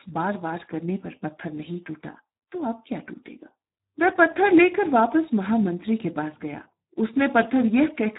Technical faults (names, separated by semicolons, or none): Speex codec